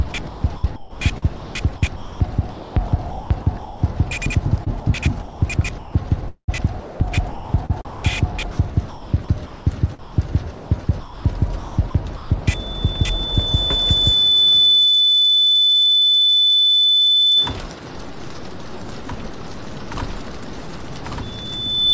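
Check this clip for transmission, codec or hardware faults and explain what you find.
Two kinds of fault stand out: the sound is repeatedly chopped by the voice detector early on, and a loudspeaker feedback squeal appears twice later in the clip.

From 0.12 to 3.82 s and again from 4.64 to 12.30 s, the sound keeps dropping out. Quieter passages and edges vanish into a smooth synthetic hiss. Roughly 1.8 s of the first stretch and 2.9 s of the second are replaced. The likely cause is sound chopped by the voice detector: the sender's detector keeps toggling transmission off, and the receiver fills the gaps with comfort noise.

From 12.51 to 17.56 s a single piercing tone near 3.5 kHz swells over about two seconds until it sits around 10 dB above the programme sound. It returns at 21.22 s, rising faster, in well under a second, and is still present when the clip ends. This is loudspeaker feedback squeal. 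The microphone is picking up a speaker it feeds, and at that one frequency the loop gain exceeds unity, so the tone keeps reinforcing itself. The band limit, with nothing above 8 kHz, fits a G.722 call path at 64 kbps.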